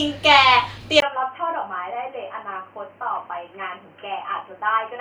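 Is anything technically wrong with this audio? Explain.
Yes. From 1.00 s onward the speech turns dull and boxy, with nothing above 3.1 kHz. A 20 ms gap marks the change, the level drops slightly, and a new faint noise appears. The input likely switched to a poorer device with a narrower band and its own noise.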